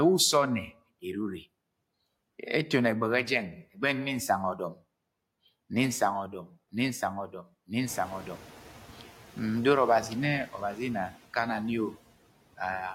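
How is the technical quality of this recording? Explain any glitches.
One glitch stands out: a noise suppressor catching up after the room noise jumps by about 17 dB around 8 s, settling about 20 dB below the speech.

From 7.86 to 8.48 s, the suppressor's noise estimate lags the sudden rise. The louder background passes through with little reduction, then sinks by about 4 dB as the estimate adapts over 620 ms. You hear a brief swell of background noise that fades back down.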